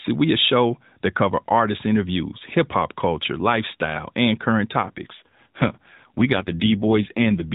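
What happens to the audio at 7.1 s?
At 7.1 s the speech is inside an AMR rate drop running from 4.82 to 7.53 s. The coder switches to fewer bits, consistent with about 12.2 falling to 5.9 kbps, so the sound turns rougher and more synthetic. The spectrogram keeps its 4 kHz ceiling with blurrier harmonics, and the waveform shows no gap.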